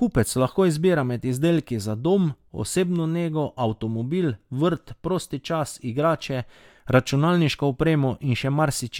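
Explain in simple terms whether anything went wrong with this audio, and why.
Nothing went wrong here; the speech comes through steadily with no glitches, dropouts or odd noises to point to anywhere along the way.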